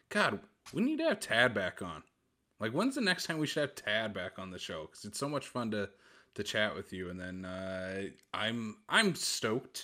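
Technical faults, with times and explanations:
0.44 s, DAB burbling: a brief burble just before "we need to have", where bit errors slipped past the error correction into the MP2 data. Corrupted samples put short noise blips into single sub-bands, which points to a bit error rate of about a tenth of a percent.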